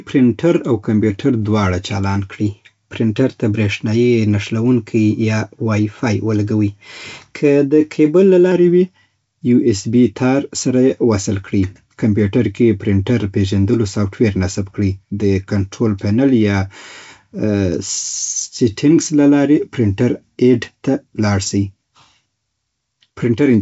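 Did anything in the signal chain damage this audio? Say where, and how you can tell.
No damaging fault detected.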